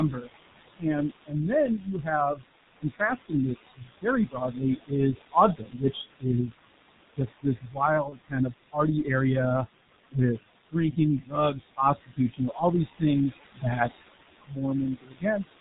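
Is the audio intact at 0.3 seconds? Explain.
No. At 0.3 s the audio sits inside a stretch of speech cut by the noise suppressor that runs from 0.11 to 6.58 s. The suppressor mistakes parts of the speech for background and turns them down with it, by about 21 dB at the deepest, adding up to roughly two seconds of affected material across the span. Soft consonants and word endings sound swallowed or faint. Unlike a dropout, nothing goes silent and the timing never jumps; quiet parts of the speech are simply pulled down.

The same suppressor also leaves noise suppressor artifacts throughout. It lowers the room noise by about 19 dB band by band, so the background sinks between phrases and swells back under them. Plain gating would switch the noise on and off in one piece. Here the background shifts in spectral colour from frame to frame. The room noise itself, about 9 dB below the speech, is just part of the recording.

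Over all of this lies heavy damage from a low-rate telephony codec. Nothing comes through above 4 kHz, and the coarse, hoarse texture points to a rate of around 6 kbit/s, which fits G.723.1. Consonants blur because the codec's voice model updates only once per long frame. A simple low-pass filter would only muffle the sound, while this codec also makes it hoarse and smeared.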